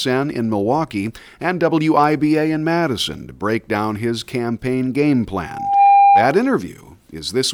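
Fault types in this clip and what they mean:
Loudspeaker feedback squeal: at 5.42 s, just after "down his campaign game", a single tone near 797 Hz rises out of the speech, swelling over roughly 0.4 s to sit about 10 dB above the talker before stopping at 6.41 s. The microphone was hearing the loudspeaker it drives, and at that one frequency the round trip through the loop gained rather than lost level, so the tone fed itself until it stopped.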